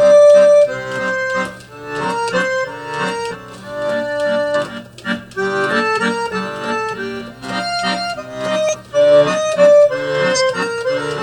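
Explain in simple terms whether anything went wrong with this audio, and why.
Compressed frames skipped at 3.3, 4.51, 7.39 and 8.64 seconds: chunks of the compressed file were lost or rejected, so playback jumps forward by roughly a tenth to a fifth of a second each time.

A corrupt frame was decoded at 10.34 to 10.42 seconds: a couple of damaged frames were played anyway, and the scrambled data put sound at the wrong pitches, producing a brief loud glitch.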